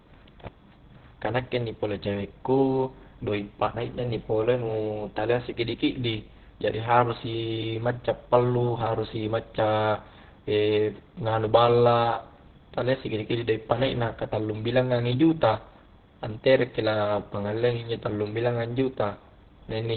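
Throughout, the speech is muffled and hoarse, with nothing above 4.4 kHz. This is likely Opus compression in its narrowband speech mode, consistent with roughly 12 kbps.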